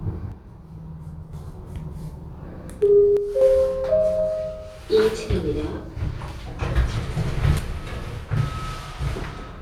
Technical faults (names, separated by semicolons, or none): one channel drops out